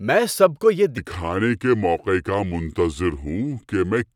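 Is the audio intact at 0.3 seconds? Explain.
Yes, the audio is intact at 0.3 s, with no fault audible at that moment.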